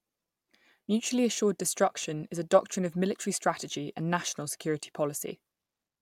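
At 2.03 s, just before "is a doctrine of", one 5.33 ms chunk of audio was delivered a chunk late and played after its successor: chunks out of order. Nothing is lost, but the swapped pair leaves three hard joins, heard as a brief jumble.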